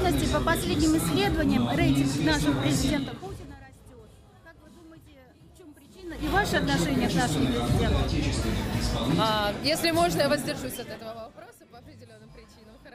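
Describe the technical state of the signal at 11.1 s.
At 11.1 s the level is falling in zipper noise, spanning 10.29 to 11.56 s: unsmoothed 3 dB steps, roughly seven per second, drop it about 25 dB, each step clicking audibly. The waveform shows a staircase envelope; the spectrogram, thin broadband vertical lines.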